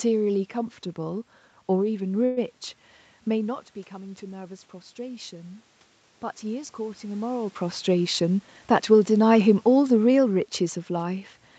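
At 2.25 s the speech stalls for 0.12 s, to 2.39 s, with the last sound stretched into a short fading buzz before it resumes where it left off. This call audio freeze is likely late packets draining the jitter buffer, so a gap was inserted and nothing lost.

From 3.9 s to 5.7 s, after the talker moves back from the microphone around 3.5 s and the level drops by about 12 dB, automatic gain rising brings the level up by about 4 dB, with the voice and room noise swelling together.

Between 8.23 s and 8.95 s a jitter buffer speed-up plays the speech at 112% speed while the pitch stays the same. The buffer trims about a tenth of a second in short pitch-period slices, so the phrase sounds hurried.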